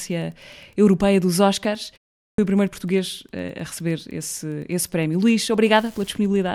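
Right from the start and all the way through there's Wi-Fi interference: a faint, steady ticking about ten times a second, sitting well below the speech. A nearby Wi-Fi radio's beacon, every 102.4 ms, is getting rectified by the audio circuit.

At 2.23 s there's a clipped start after a pause. After a 0.34 s gap, the output device seems to have dozed off and needed time to wake, so the first 0.15 s of speech is swallowed and the speech jumps in abruptly from silence.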